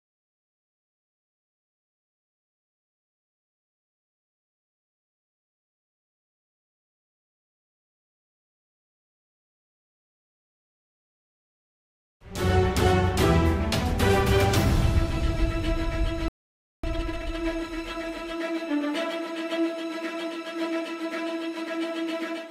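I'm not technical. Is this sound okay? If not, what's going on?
No. At 16.28 s the sound stops dead for about half a second, until 16.84 s. This is a playback stall: the player most likely ran short of data and fell silent.

From 16.84 to 17.38 s comes time-compressed catch-up. The player races through the backlog at twice normal speed. Unlike a simple speed-up, the pitch stays normal rather than turning squeaky, because small pieces are cut out and blended.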